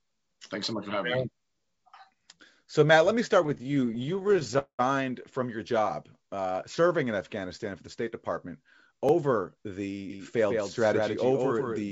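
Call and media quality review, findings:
Repeated stalls (stutter), 3.44–4.56 s. Jitter buffer underrunning over and over: 32 short stalls, longest 17 ms, each bridged by continuing the last sound. About 326 ms inserted, 29% of the span, nothing lost. Audio drags and stutters.

Call audio freeze, 4.58–4.81 s. Likely cause: packets held up in transit, buffer ran dry. Last sound extended as a fading buzz, then about 90 ms of near-silence. 202 ms gap inserted, delay grows by the same; playback resumes where it stopped.

Jitter buffer slow-down, 6.17–6.89 s. Receiver rebuilding its reserve by repeating single pitch periods and pause fragments. Playback at 88% speed, pitch unchanged, 97 ms added. Sounds stretched and drawn out.

Jitter buffer speed-up, 8.91–9.65 s. Buffer over target, receiver trimming short pitch-period pieces back to back. Playback at 112% speed, pitch held, about a tenth of a second removed. 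Audio sounds hurried.

Block of digital silence, 9.09 s, inside the speed-up. 2.2 ms of silence, likely output buffer not filled in time, no fade either side. Heard as a tick.

Doubled audio track, 10.1 s to end. Second full-band copy around 150 ms late, about 5 dB down, dry, no room colour, starts abruptly. Likely cause: same audio captured again via a slower path and mixed in. Band ends at 8 kHz throughout, as G.722 does.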